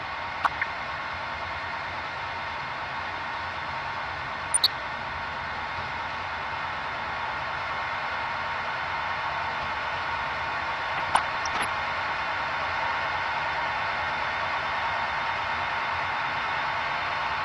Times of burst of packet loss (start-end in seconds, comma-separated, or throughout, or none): none